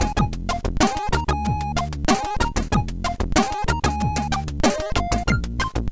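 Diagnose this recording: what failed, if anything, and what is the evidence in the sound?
Nothing in the recording points to a failure at any stage. No fault can be heard anywhere in the audio.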